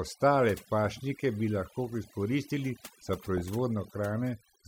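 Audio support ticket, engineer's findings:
Overdone noise removal across the whole speech clip: background dropped and broken into twinkling specks. Noise reducer set too aggressive, cutting bands near its noise estimate and taking quiet voice detail with them.

DAB burbling, 3.09 to 3.48 s: short noise blips over the speech, 23 frames hit. Weak DAB reception; bit errors at a fraction of a percent slipping past error correction into MP2 data, wrong samples putting short noise blips in single sub-bands.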